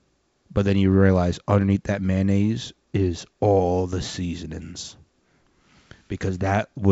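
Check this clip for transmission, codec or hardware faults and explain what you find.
No transmission, codec or hardware faults found; the speech comes through G.722 wideband coding at 64 kbit/s with nothing above about 7.7 kHz and at most faint coding texture.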